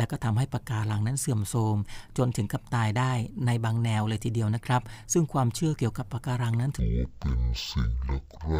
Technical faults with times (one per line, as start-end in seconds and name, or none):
6.79-8.60 stereo read as mono